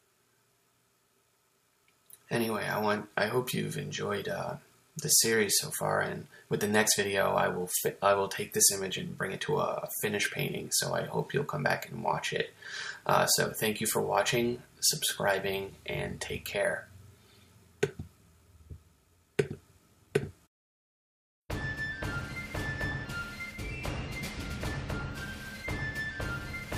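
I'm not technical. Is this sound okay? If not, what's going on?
Yes, it's fine; nothing here sounds wrong or broken.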